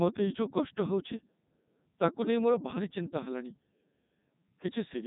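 From start to finish the speech runs through a Codec 2 vocoder, rebuilt from sine waves, so it's robotic and buzzy with nothing above 3.8 kHz, which fits the 3.2 kbit/s mode.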